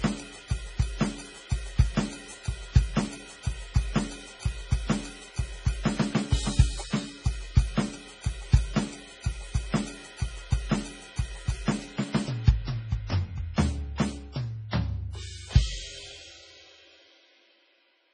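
Throughout, the music sounds heavily watery and swirling, with nothing above 10.4 kHz, likely from MP3 compression at a low bitrate near 24 kbps.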